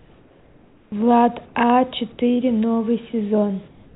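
From 0 to 0.92 s, and again from 1.46 to 1.55 s, the background is comfort noise. It is steady and featureless, about 4 dB and about 1 dB quieter. This is likely discontinuous transmission.

At 3.68 s, a voice detector dropped the sound. About 150 ms of the speech's tail is lost to steady noise until the end. The detector likely misjudged it as background. Nothing is heard above 4 kHz, which fits a G.711 call codec.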